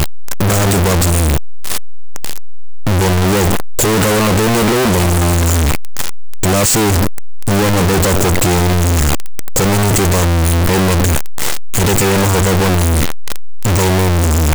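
From start to finish the speech is buried under very loud, harsh distortion, with quiet stretches blaring as strongly as the louder passages. This points to a signed and unsigned mix-up: the 8-bit samples were likely read with the wrong sign convention, flipping the top bit so every crossing through zero leaps across the full range.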